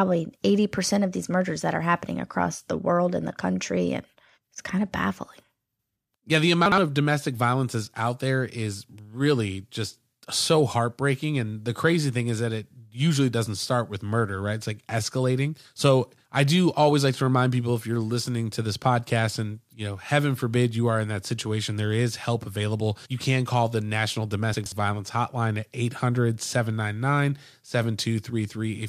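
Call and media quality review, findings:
Chunks out of order at 6.66–6.78 s and 24.54–24.72 s: brief jumbled speech with three hard joins. A 60 ms chunk plays one slot late, then two slots late. Probable jitter buffer or write-queue reordering. Unlike packet loss, nothing is missing or concealed.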